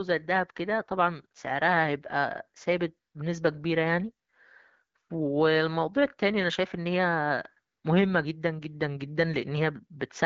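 Speech over an AMR-WB HD Voice link; no faults.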